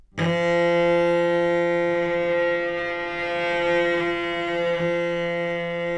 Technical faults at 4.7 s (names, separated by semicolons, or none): none